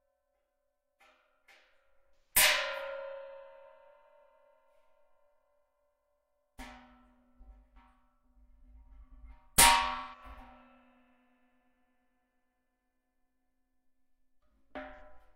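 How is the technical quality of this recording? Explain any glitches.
Three short dropouts mar the recording, all AAC frame loss with concealment, at 2.16–2.42 s, 9.95–10.23 s and 14.94–15.01 s. The first two cover about 170 ms each, which fits four lost frames. The last covers about 43 ms, consistent with a single frame. The decoder rebuilds the missing audio from the last good spectrum, so each gap sounds like a brief smeared, noisy patch.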